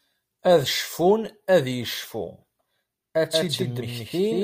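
From 3.32 s onward, a doubled audio track: an equally loud copy, likely re-captured, trails about a fifth of a second behind, so every waveform shape appears twice.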